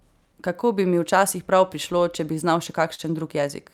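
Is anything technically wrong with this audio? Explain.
Yes, the speech has three related timing faults.

Throughout, the pacing feels faintly unsteady, with small hiccups at irregular spacing. This is clock drift between sender and receiver: the sender's clock runs roughly 2% slow, so the receiver's jitter buffer keeps draining and must be patched to stay in step.

From 0.27 to 2.36 s, just before "bi znal še", the speech drags slightly, at about 98% speed. These are repeated timing corrections: the receiver repeats short pieces, adding about 50 ms in total, to compensate for the slow sender.

From 2.95 to 3.01 s, right after "bi znal še", a sound is held too long, with a slight buzz or dip. This is a short stall from a late packet: the buffer ran empty, so the receiver stretched the last sound for 39 ms until data arrived, losing nothing.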